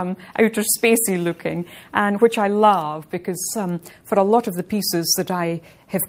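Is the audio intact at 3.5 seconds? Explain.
Yes, at 3.5 seconds the audio is intact, with no dropout, click, distortion or other fault at that point.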